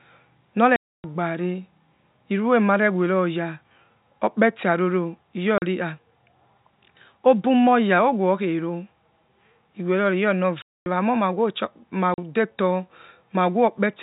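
Telephone-band speech, topped out at 4 kHz by G.711 coding, is chopped by packet loss filled with silence: hard-edged dropouts at 0.76–1.04 s (280 ms), 5.58–5.62 s (40 ms), 10.62–10.86 s (240 ms) and 12.14–12.18 s (40 ms). All are multiples of 20 ms, which fits 20 ms packets.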